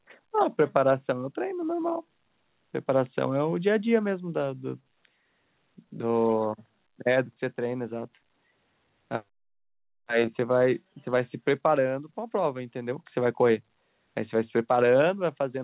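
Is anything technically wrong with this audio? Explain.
No, nothing is technically wrong with this audio.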